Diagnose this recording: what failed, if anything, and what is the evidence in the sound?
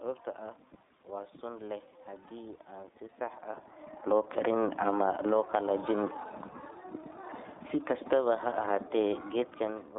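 Codec stage: iLBC codec throughout, in its 30 ms frame mode. Sound is confined to roughly 300 Hz to 3.7 kHz. It has a rough, synthetic edge.

Network stage: one lost iLBC frame at 2.28 to 2.32 s. The decoder filled the 30 ms gap with a buzzy repeated pitch cycle. It recovered immediately.

Call processing: automatic gain falling at 3.96 to 5.57 s (about 8 dB) and 7.64 to 9.94 s (about 3 dB). Speech and background sink together as gain is lowered.

Call processing: automatic gain rising at 4.33 to 4.92 s, 5.48 to 6.12 s and 8.16 to 8.69 s, each about 4 dB. Speech and background swell together as the control lifts gain.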